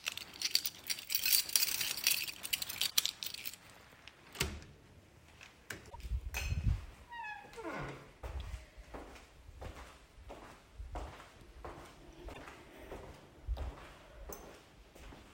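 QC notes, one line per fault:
2.89–2.93 s, 5.89–5.96 s, 12.33–12.39 s: broken MP3 bit reservoir, a brief glitch as the audio skips ahead. The likely cause is cut frames leaving the next 24 ms frames decoding misplaced bytes. This shows as a short spectrogram disturbance and a waveform discontinuity.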